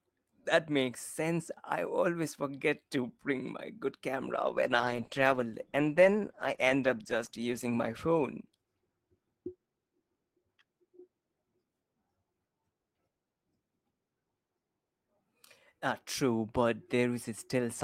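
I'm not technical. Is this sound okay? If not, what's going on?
No. A call bitrate drop runs from 4.18 to 10.55 seconds. The connection had less room, so the speech was squeezed into far less data. It sounds rougher and more muffled, worst for about 3.1 seconds, then clears.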